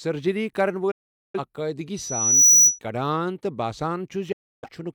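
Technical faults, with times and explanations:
0.91 to 1.40 s and 4.32 to 4.72 s, digital broadcast dropout: the speech fades to silence within about 8 ms and stays muted, about 0.43 s in the first hole and about 0.30 s of lost sound spread over about 0.38 s in the second, because the receiver discarded failed frames. Unlike a physical cut, the edges are clean short fades and the sound returns later in the programme, with the missing part gone.
1.97 to 2.79 s, loudspeaker feedback squeal: a single 5.9 kHz tone builds over roughly half a second to about 15 dB above the speech, as the microphone picks up its own loudspeaker and the loop gain at that frequency exceeds one. A fixed whistle would not grow by itself like this.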